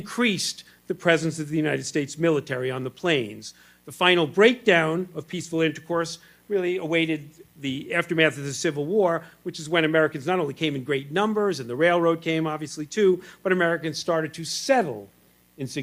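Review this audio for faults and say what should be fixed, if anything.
No faults are audible anywhere in the recording, so nothing needs fixing.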